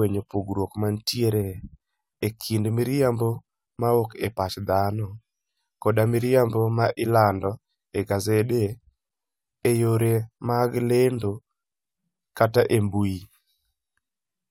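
No technical faults occur at any point in the speech.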